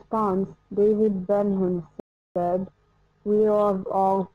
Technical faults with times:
1.00-4.35 time-stretched section
2.00-2.36 rebuffering stall

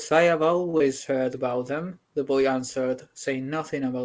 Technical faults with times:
0.70-0.75 short stall from a late packet
0.77-0.82 short concealed packet loss

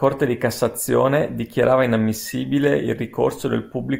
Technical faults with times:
none

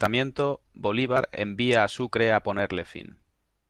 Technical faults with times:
0.99-1.17 lost packet rebuilt from error correction
2.65-2.67 lost packet rebuilt from error correction

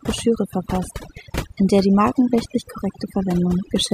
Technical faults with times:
0.00-3.93 overdone noise removal

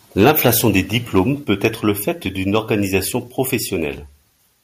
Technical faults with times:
0.21-0.49 microphone overload
1.44 microphone volume stepped down

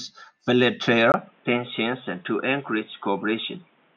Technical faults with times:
1.12-3.96 input switched to a poorer device

